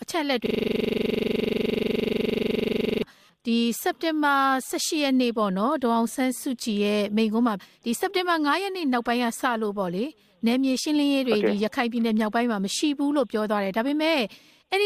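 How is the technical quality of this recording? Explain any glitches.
The recording has one serious glitch, a system hang loop running from 0.46 s to 3.03 s. The computer or its audio driver stalled while the sound hardware kept replaying the same ring buffer, so one 42.7 ms slice, which fits a 2048-sample buffer, repeats exactly some 60 times. At 23.4 repetitions per second it comes across as a rough, mechanical stutter-buzz. On a waveform, an identical block tiles across the span. A spectrogram shows vertical striping and harmonics spaced 23.4 Hz apart.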